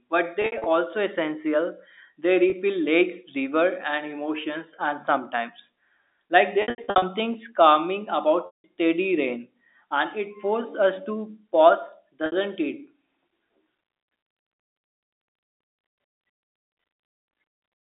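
Packet loss with pitch repetition hits the speech five times: 0.42–0.66 s, 2.50–2.52 s, 6.62–7.02 s after "emotions and sometimes like", 8.46–8.64 s before "rain and it forces", and 12.26–12.32 s after "forces us to pause". Lost audio is patched by repeating the last pitch period. Brief gaps sound buzzy and held. The longer ones fade out.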